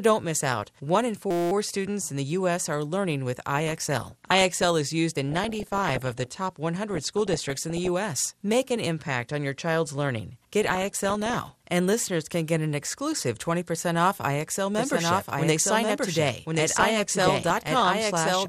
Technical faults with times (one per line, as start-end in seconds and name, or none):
0.00-18.49 MP2 compression
1.31-1.52 system hang loop
3.67-4.64 DAB burbling
5.29-6.27 DAB burbling
6.89-7.88 DAB burbling
10.62-11.53 DAB burbling
14.75-18.49 doubled audio track
16.69-17.68 DAB burbling